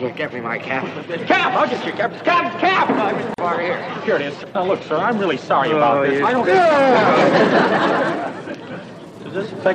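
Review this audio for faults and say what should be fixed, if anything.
A gap at a join of encoded pieces opens from 3.34 to 3.38 s. It is a 42 ms silence in otherwise continuous sound, and it repeats every 6.0 s. Its edges are smeared by the codec, so the fully silent part is shorter. The sound then resumes where it stopped. The pieces were encoded separately and joined as they were. Each encoder run left its start-up delay and its padded final frame in place, so silence sits at every seam. To fix it, trim encoder delay and padding before joining, or encode the whole piece in one run.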